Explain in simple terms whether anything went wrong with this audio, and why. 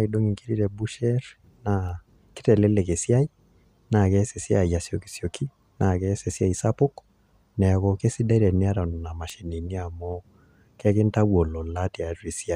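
Yes, something went wrong twice. A single stored digital value was corrupted, a bit error spike, at 1.89 seconds and again at 9.30 seconds. Each bad sample jumps far off and snaps straight back, so you hear a brief, sharp tick unrelated to the speech. The second tick is louder.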